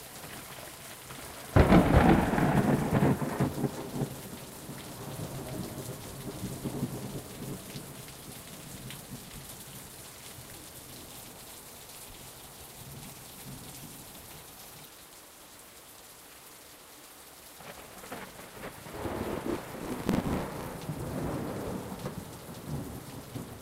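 From 19.51 s to 20.73 s, a processor overload crackle tears through the sound for about 1.2 s. The processor kept missing its deadlines, and each missed block, roughly 10 ms long, was filled with a replay of old audio rather than fresh material. Dozens of these hard-edged repeats join into a gritty crackle. On a waveform the span shows abrupt discontinuities and short repeated segments. On a spectrogram it appears as a dense run of thin vertical broadband streaks that stop when the load clears.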